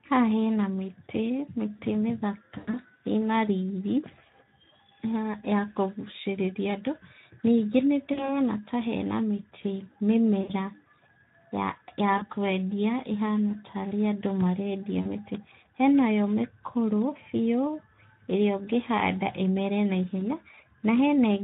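Speex codec damage runs throughout the speech at 11 kbps. The excitation is starved of bits, so voicing sounds hoarse and noisy. On a spectrogram, harmonics look smeared, and any content above 4 kHz appears as a diffuse, noise-like wash.

VoIP packet loss concealed by the speech codec first occurs at 2.57–2.82 s. About 120 ms is missing, scattered over 160 ms, with one 100 ms run. Shorter gaps follow at 8.13–8.32, 10.41–10.51, 12.17–12.30, 15.01–15.06 and 20.19–20.22 s. The decoder repeats its last pitch and filter, producing buzzy, fading tones. On a waveform these look like periodic, decaying stretches. Harmonics show as flat horizontal lines on a spectrogram.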